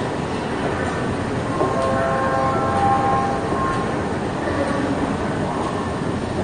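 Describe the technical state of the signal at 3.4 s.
At 3.4 s the signal shows AAC compression, present across the whole clip, and likely the result of AAC-LC encoding at a low rate consistent with about 32 kbps. With too few bits, the encoder coarsely quantised its frequency lines and dropped everything above 9.7 kHz. The sound is plainly damaged: dull and top-cut, with smeared transients and a watery, fizzy texture in the upper band.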